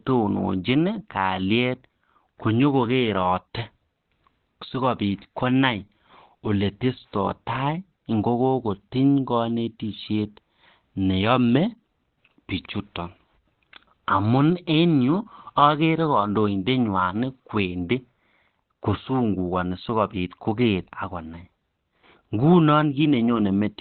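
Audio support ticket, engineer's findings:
Speech muffled and hoarse, whole clip. Nothing above about 4.3 kHz; sibilants dull, top end gone. Likely Opus compression in speech (SILK) mode, narrowband, at a very low rate, which fits about 12 kbps. Encoder narrows bandwidth and models the voice coarsely when bits are scarce. Heavy codec damage throughout.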